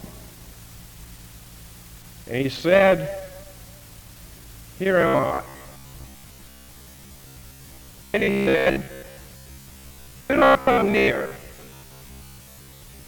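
From 5.01 s to 13.07 s, new audio likely arrived too seldom, so playback kept repeating a slice of about 15 ms for most of that stretch. The result is robotic sound from repeated short buffers: a rigid, metallic 66.8 Hz buzz.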